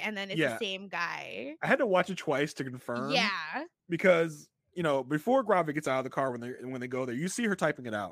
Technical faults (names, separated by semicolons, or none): none